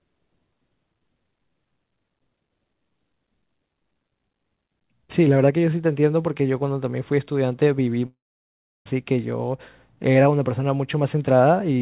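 At 8.06 s the speech breaks off and does not return until 8.87 s, a gap of about 0.8 s that sounds like a long network dropout. The last sound is stretched into a buzzy tail that fades within roughly a tenth of a second, leaving near-silence for about 0.7 s. The speech then resumes further on, with the missing stretch simply gone. That is the likely cause: the receiver ran out of incoming audio and could only conceal briefly. What sets this apart from ordinary packet loss is the length. Short losses produce quick warbles or clicks, not a fade into silence. Throughout, the telephone-band sound of the call path, with nothing above 4 kHz, stays unchanged on either side of the gap.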